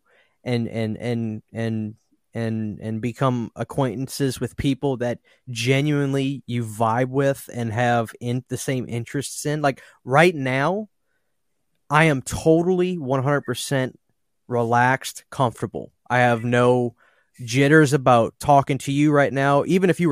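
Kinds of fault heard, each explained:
Nothing in the speech here stands out as a technical fault, so there's nothing to list.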